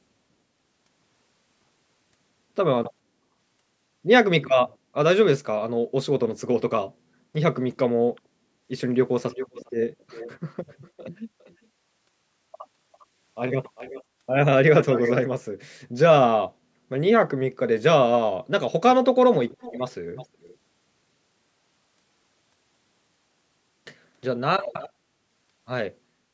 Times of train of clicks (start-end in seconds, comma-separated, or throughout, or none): none